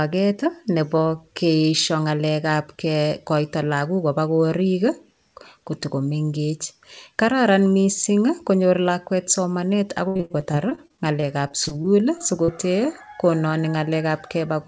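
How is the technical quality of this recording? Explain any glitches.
Quality drops sharply for one stretch, from 10.08 s to 12.50 s, where the speech breaks up with repeated packet loss and takes on a robotic sound. The call's network path kept losing or delaying packets across these two and a half seconds, and the receiver filled each hole by stretching out the last bit of audio it had. The gaps come in quick succession, the longest about 71 ms, and roughly a fifth of the stretch is patched-in sound. The speech turns choppy and robotic, with fragments missing.

The audio has no content above 8 kHz, which fits a wideband call codec such as G.722 at a bitrate in the region of 64 kbps.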